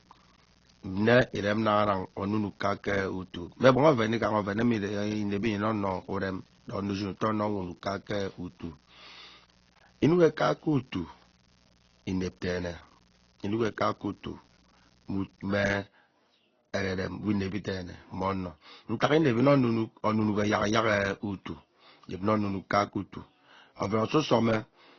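From start to finish the speech has no content above 6.8 kHz. It sounds dull. Two kinds of coding artefact are heard together. The likely cause is transcoding between lossy codecs. The sound fits a low-rate AAC-LC pass near 24 kbit/s, then Opus near 32 kbit/s. The second codec spent its bits on the first one's damage. The lowest cut-off survived.

From 0.0 s to 15.44 s a mains buzz runs under the speech. It sits well below the speech, roughly 35 dB down. It is steady and raspy, not a smooth hum. Sharp switching spikes arrive twice in every 60 Hz cycle. That spreads harmonics from 60 Hz up into the kilohertz range. A dimmer, rectifier or missing shield would do this. The buzz then stops.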